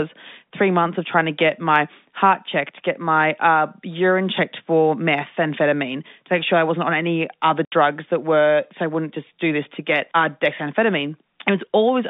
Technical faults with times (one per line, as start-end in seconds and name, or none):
7.65-7.72 packet loss filled with silence